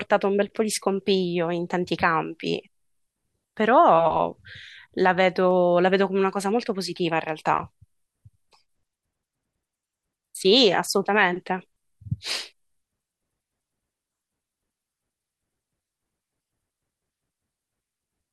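Clock slip clicks run from 0.66 s to 17.61 s: faint regular ticks roughly every 0.7 s, about twenty in all, through the speech. Likely cause: two unsynchronised clocks differing by around 30 ppm, so single samples get dropped or repeated.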